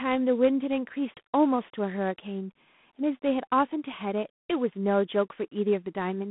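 A harsh, rasping hiss tracks the speech level throughout, confined to 150 Hz to 3.5 kHz: G.726 ADPCM coding with too few bits, which fits 24 kbit/s.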